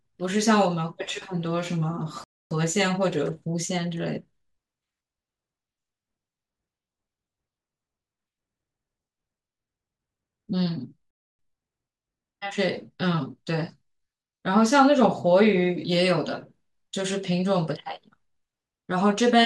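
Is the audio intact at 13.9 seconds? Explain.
No. At 13.9 seconds the speech is hurried while its pitch stays normal. This is time-compressed catch-up, lasting from 11.39 to 14.21 s at about 1.1 times normal speed. After a stall, the player works through its backlog by removing small slices of audio and cross-fading across each cut. That shortens the timing without shifting pitch.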